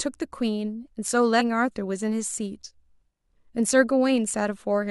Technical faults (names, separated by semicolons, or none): damaged data in a compressed stream